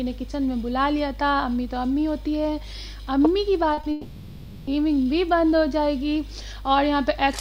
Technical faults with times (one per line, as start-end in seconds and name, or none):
3.73-3.85 short concealed packet loss
3.91-4.69 long network dropout